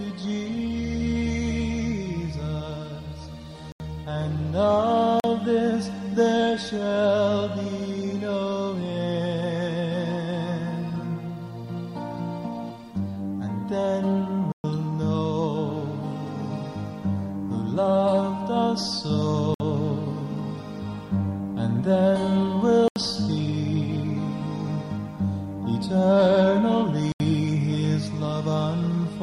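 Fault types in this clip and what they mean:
block of digital silence: at 3.72, 5.20, 14.52, 19.54, 22.88 and 27.12 s, the sound drops to silence for 80, 40, 120, 57, 80 and 80 ms respectively, then returns just as abruptly, with no fade on either side. The longest hole, near 14.52 s, comes across as a short dropout. This points to the output buffer not being filled in time.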